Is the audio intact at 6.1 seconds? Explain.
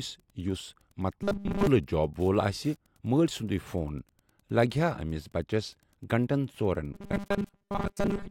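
No. Wi-Fi interference runs throughout: a nearby radio's beacon, rectified by the circuit, ticks faintly every 102.4 ms, about 40 dB below the speech, showing as evenly spaced thin vertical lines on a spectrogram.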